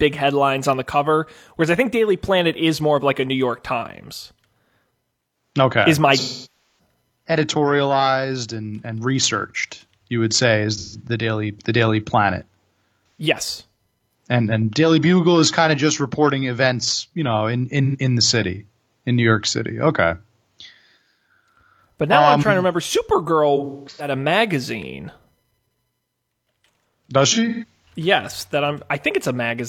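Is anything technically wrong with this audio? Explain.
Yes. The speech is broken by AAC frame loss with concealment at six points: 6.19 to 6.79 s, just before "editorialized and and researched"; 10.77 to 11.01 s, after "you would say is"; 13.18 s; 17.84 to 17.96 s, between "events you know in" and "in the city in"; 23.56 to 24.14 s; and 27.32 to 27.93 s. Each time coded frames went missing and the decoder patched the gap from the last good spectrum, giving smeared, phasey or noisy stretches in place of the voice. The longest, about 0.6 s, sinks toward silence and fades back. The last two are scattered dropouts, with the longest run around 200 ms and 150 ms. A spectrogram shows blurred horizontal smears with decaying energy.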